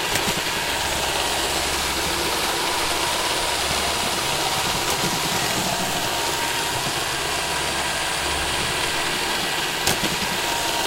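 Everyday sounds, with no technical fault audible anywhere.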